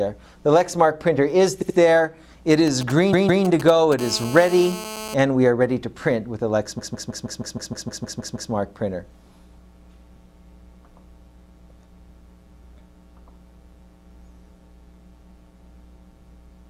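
At 1.61 s the audio hits repeated frames: a 78 ms block of compressed frames was delivered more than once, so the decoder plays it twice more, stuttering and adding about 157 ms. On a spectrogram the same slice appears tiled side by side. The waveform shows identical copies of one short envelope in a row.

From 2.67 s to 3.94 s there are GSM signalling bursts. A nearby 2G handset sends brief clusters of radio bursts at 217 Hz, and the audio circuitry rectifies them into galloping dit-dit-dit ticks and short raspy buzzes, roughly 15 dB below the programme. A spectrogram shows a comb of harmonics spaced 217 Hz apart, switched on and off in rhythmic clumps, and the waveform carries small spiky packets.

Inside that stretch, from 3.12 s to 3.44 s, a 157 ms block of repeated frames plays twice more, adding about 313 ms. The second, longer slice stutters more slowly and shows the same identical tiling.

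From 3.99 s to 5.14 s the GSM phone buzz runs steadily, as during a call: a hard 217 Hz rasp with many harmonics, about 15 dB below the programme, unrelated to the sound itself. On a spectrogram it forms a continuous ladder of horizontal lines. In the waveform it appears as a fine, regular pulse train laid over the signal.

The worst repeated frames run from 6.78 s to 8.50 s. One 157 ms block is replayed eleven extra times, adding about 1.72 s, and the result is a locked, machine-gun loop. The spectrogram shows a long row of identical blocks, and the waveform repeats one envelope like wallpaper.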